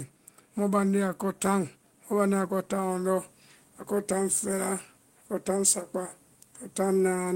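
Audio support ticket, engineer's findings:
Automatic gain rising, 0.56 to 3.31 s: speech and background noise floor swell together by about 5 dB over roughly 2.75 s. Probable component: input AGC raising gain on a quiet level. The noise rises with the speech, so it is not a level change at the source.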